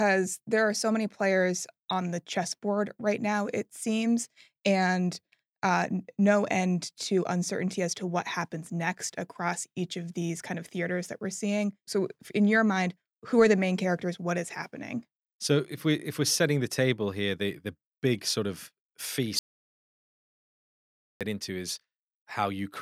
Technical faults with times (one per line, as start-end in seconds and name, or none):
19.39-21.21 audio dropout to silence